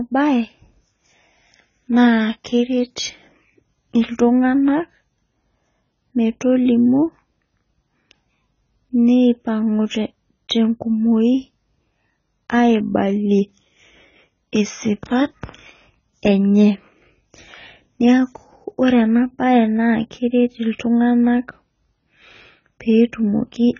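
Throughout, the speech stops at 7 kHz, a flat spectrogram ceiling above patchy, gapped bands. It sounds dull and warbly, likely from heavy AAC compression at a very low bitrate.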